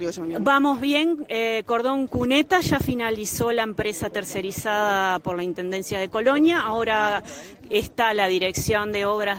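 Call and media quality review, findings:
No audible faults found in this recording.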